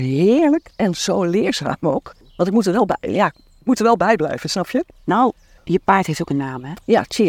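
No technical faults can be heard anywhere in this speech recording. At no point does anything in the audio path draw attention to itself.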